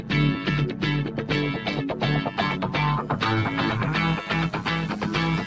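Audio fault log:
Throughout, overlap-add ripple: there's a fast, rough flutter on everything, like a buzzy robotic tremolo riding on the sound at around 100 Hz, with the level swinging by about 6 dB. That points to the audio having been chopped into windowed frames and stitched back together with an overlap that doesn't add up to a flat gain, so the level dips and swells once per frame. The band stops at about 7 kHz, which fits a G.722 call link.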